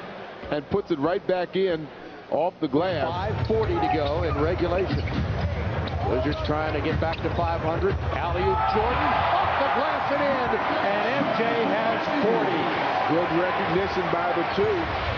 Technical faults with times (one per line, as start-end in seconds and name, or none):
none